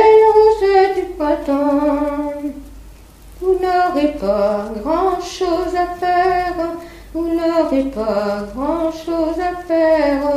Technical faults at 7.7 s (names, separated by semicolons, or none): none